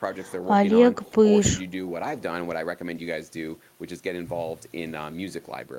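There are no technical faults to describe in this speech recording.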